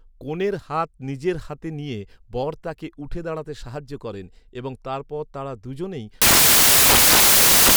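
From 6.22 s to the end at 7.77 s, the speech turns into loud, harsh broadband noise. Samples are built from the wrong bytes, so the fast-changing low bits dominate each value.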